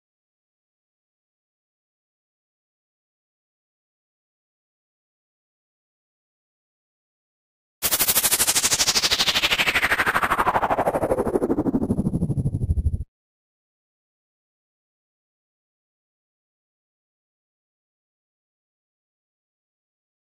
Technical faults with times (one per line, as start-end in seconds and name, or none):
0.00-20.39 sample clock jitter